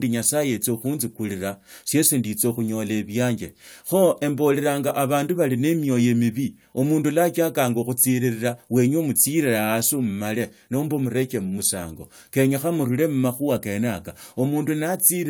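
No technical faults can be heard anywhere in the recording; the signal stays continuous and stable throughout.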